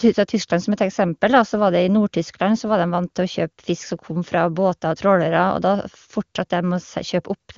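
Listening through this speech clip, nothing stood out as a technical problem.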